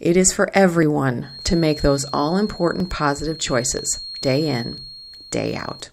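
At 0.83 s the speech jumps forward a tiny amount, about 10 ms, with no silent gap. The same skip returns at 1.81, 2.80, 3.79 and 4.78 s. That steady spacing of roughly one second is what marks this as audio missing between chunks rather than random dropouts: the recorder likely works in one-second blocks and loses a sliver at each handover, butting the two sides together so each seam registers as a brief hitch.

From 1.19 s to the end, a thin feedback whistle near 4.3 kHz sits behind the speech, roughly 15 dB below it. The loop from loudspeaker to microphone is likely held just at the edge of feedback, so that one frequency keeps sounding without building into a howl. Unlike steady electrical hum or a test tone, it is a single high pitch that swells and fades slowly in level without building into a howl.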